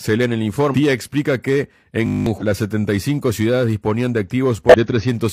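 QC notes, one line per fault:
0.70–0.75 s, 2.37–2.43 s, 4.69–4.74 s: damaged data in a compressed stream. Three quick squawky blips of about 50 to 60 ms each, the first right after "lee en el" and before "explica que". At each one, a bit of the coded stream is corrupt, so the decoder chokes on those frames, loses its place and hunts for the next valid header, spitting out a garbled chirp as it resyncs.
2.06–2.26 s: system hang loop. Just after "explica que", the same 20 ms scrap of audio repeats 10 times back to back, so you hear a steady 50 Hz buzz instead of speech. It sounds like the machine or driver stalled while the sound hardware kept replaying one small chunk of its ring buffer. That tiny loop points to a short buffer, and roughly 200 ms of real audio never makes it out.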